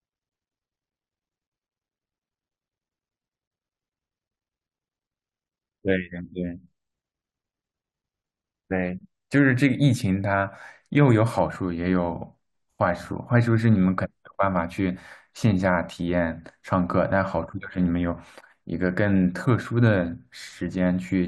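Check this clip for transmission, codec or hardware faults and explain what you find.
Nothing stood out on listening through this speech recording.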